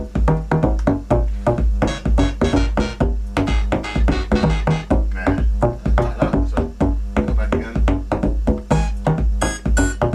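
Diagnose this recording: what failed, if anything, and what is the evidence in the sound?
No fault can be heard.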